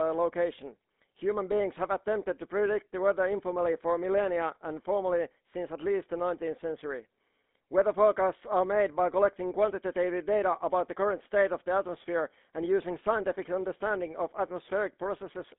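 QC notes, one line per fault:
throughout: GSM full-rate codec. The speech sounds plainly buzzy and gravelly. The codec drives a vocal-tract model with sparse, regular pulses. Sound sits in a 200 Hz to 3.6 kHz line band, with nothing above 3.8 kHz. This fits 13 kbps coding.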